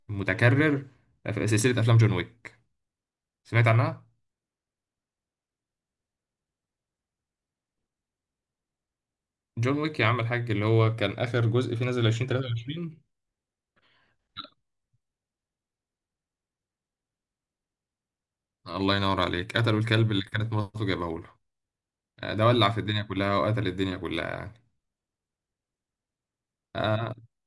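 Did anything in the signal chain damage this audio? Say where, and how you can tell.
Yes. The damage is at sample-rate conversion, where the resampler restarted on every block: from 20.6 to 22.1 s the speech carries regular ticks at 10 Hz, which fits 100 ms blocks converted separately, likely from 48 kHz to 24 kHz. A spectrogram shows thin vertical broadband lines every 0.1 s only under signal, and the waveform shows small steps at each block edge.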